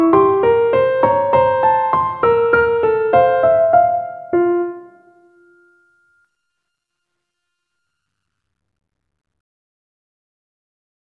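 No technical faults can be heard anywhere in this recording.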